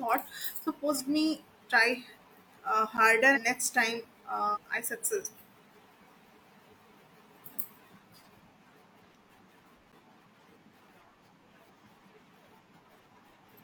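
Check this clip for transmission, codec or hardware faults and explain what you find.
There are two kinds of fault in this speech clip, a couple of dropouts and several bursts of corrupted stream data.

Block of digital silence at 2.97 s and 9.92 s. Each time a roughly 10 ms chunk of samples drops to silence, as if the output buffer wasn't filled in time. The hard edges on both sides make each one sound like a quick tick rather than an audible gap.

Damaged data in a compressed stream at 3.32 to 3.38 s, 4.51 to 4.58 s, 8.22 to 8.27 s and 13.48 to 13.53 s. Bad bytes in the stream throw the decoder off, and it garbles the frames while it resyncs to the next header. Each event lasts around 50 to 65 ms and comes out as a short blip.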